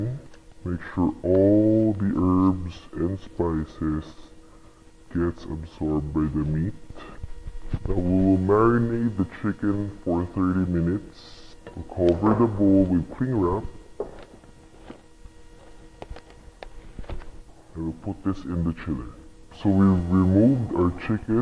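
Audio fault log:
Throughout, wrong sample rate: the whole clip runs at 0.689 times its proper speed, and its pitch sits 6.45 semitones low, since both shift together whenever samples are clocked out more slowly than they were captured and nothing resamples them. Every event is stretched in time and dropped in frequency by the same ratio, which fits audio recorded at 32 kHz being played back at 22 kHz.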